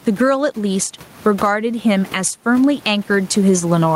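Gain pumping runs the whole way through this speech, with the gain swinging by around 15 dB; the room noise sits about 30 dB under the talking. Likely the gain's set too hot and a fast limiter keeps clamping down.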